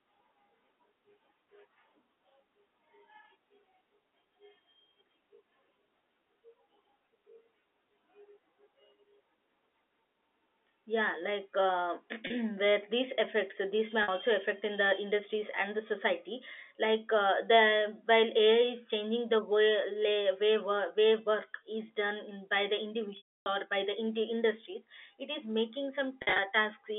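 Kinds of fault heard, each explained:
Packet loss with pitch repetition: stretches of the stream went missing, and the receiver bridged each gap by looping the last pitch cycle and fading it out. The 30 and 50 ms losses, the latter between "effects these may" and "affect in", sound like a brief buzzy hold. The 290 ms gap after "done in by the" decays into silence. A waveform shows identical repeating cycles under a shrinking envelope, and a spectrogram shows frozen, flat harmonic stripes.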